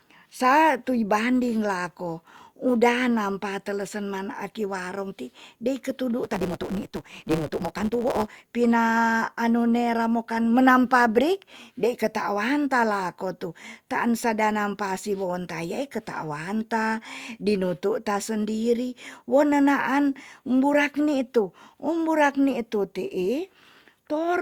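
From 6.23 to 8.47 s, between "warong ti dei ketudu" and "pina anu nera mokan", a block size mismatch (truncated) occurs: each block loses its tail, which fits 512-sample blocks read short. The speech runs 1.6 times fast at near-normal pitch, under a 150 Hz buzz.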